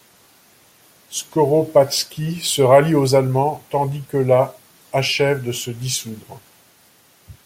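Nothing stood out as a technical fault on listening to this speech recording.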